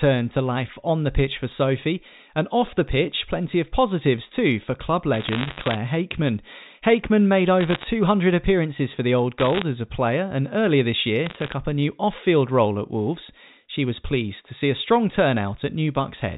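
Bit errors on a digital phone line crackle through the speech in four bursts: 5.14 to 5.78 s, 7.61 to 7.83 s just before "appearances for the", 9.40 to 9.62 s just before "as a player and", and 11.26 to 11.53 s between "and earlier this year" and "up a new off". Roughly one bit in a hundred flips in the G.711 A-law stream during the first and third bursts, and about 0.7 percent during the second and fourth. Each flip corrupts a single sample, and hits on sign or high-order bits become sharp ticks over otherwise unchanged speech.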